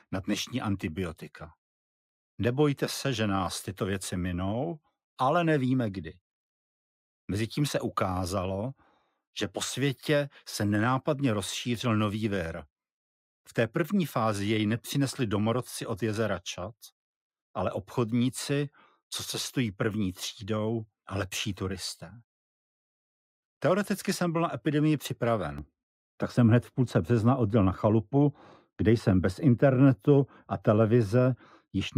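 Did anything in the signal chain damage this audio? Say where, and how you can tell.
Yes. From 25.58 s on, de-emphasis was applied wrongly. Treble slopes smoothly to about 11 dB down at 10 kHz, muffling the sound, with no low-pass filter's abrupt cutoff.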